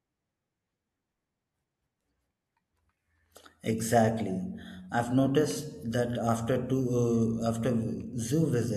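Nothing in this speech recording stood out as a technical problem on listening.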